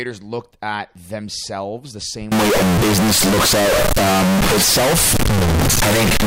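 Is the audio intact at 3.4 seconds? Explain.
No. Float read as integer affects the audio from 2.32 s, just after "looked at themselves the", to the end of the clip at 6.27 s. Samples stored as 32-bit float are likely being interpreted as 32-bit integers, so the sign and exponent bits dominate each value. The waveform turns almost square at a nearly fixed, high level, making the speech extremely loud and harsh, with background noise as loud as the voice, though the pitch can still be followed.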